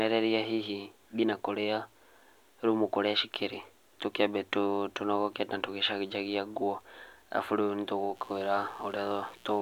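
Mains buzz enters at 8.14 s and runs to the end of the speech at 9.62 s: a steady, raspy buzz built on 60 Hz. Sharp switching spikes, twice per mains cycle, leak into the signal path, spraying harmonics up into the kilohertz range, roughly 30 dB below the speech.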